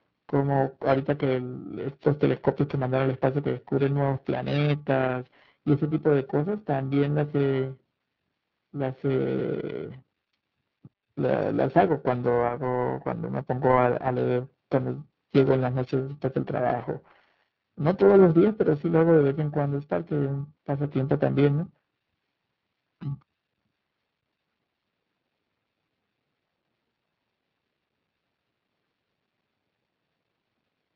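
Tandem speech coding runs through the whole recording. The speech appears to have passed through a GSM full-rate coder, then a G.711 mu-law link, then a G.729A coder at 8 kbit/s. That puts two low-rate speech codecs in a row, with the second one re-encoding what the first had already degraded. The speech sounds rough and noisy, vowels warble, and the voice is muffled, with nothing above 3.8 kHz.

Periodic clock jitter is also present from start to end. The converter's sample clock wobbles at around 1 kHz, so every component of the speech gains sidebands spaced about that far above and below it. Higher-pitched content picks up stronger sidebands, which gives voiced passages a rough, metallic edge. The effect disappears in the pauses because there is nothing for it to modulate.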